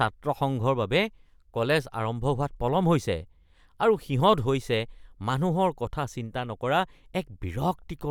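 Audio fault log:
No faults heard anywhere in this speech recording.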